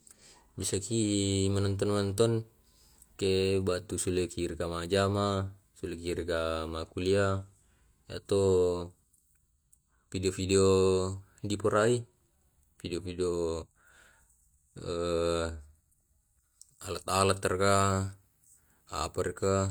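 No technical faults can be heard anywhere in this recording.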